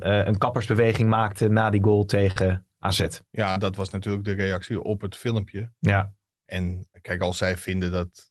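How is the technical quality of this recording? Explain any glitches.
Two brief glitches affect the recording, which has passed through a call codec whose spectrum stops at about 12 kHz. Short concealed packet loss occurs at 2.31–2.39 s, just after "maakten na die goal", and again at 3.52–3.59 s. About 40 ms of audio went missing each time, and the receiver extrapolated the preceding sound to fill it. You hear a quick smear, and a spectrogram shows smoothed, repeated content without crisp detail.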